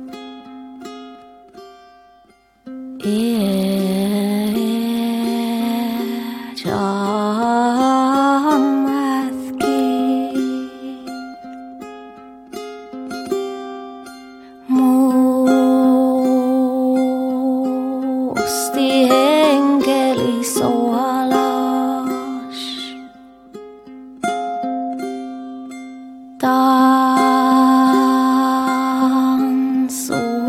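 Nothing in the audio stands out as a technical fault, so there's no problem to point to here.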